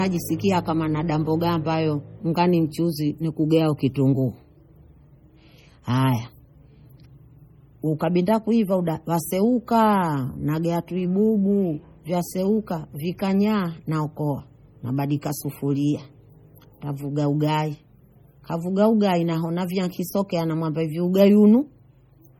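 Throughout the speech, the sound carries the smeared, swirling artefacts of heavy MP3 compression, with nothing above 19.9 kHz. The likely cause is low-bitrate audio saved at a high bitrate: damage from an earlier pass near 32 kbit/s, carried unchanged into a 192 kbit/s file.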